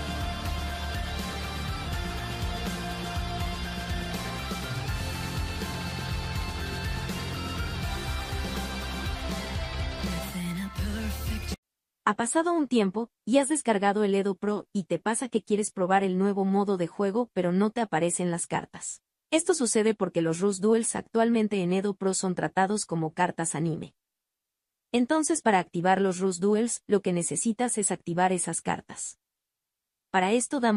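No technical faults can be heard anywhere in the audio, and the signal stays steady and intact from its opening moment to its last.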